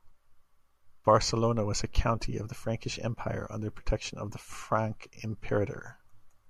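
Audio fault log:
No faults heard anywhere in the speech.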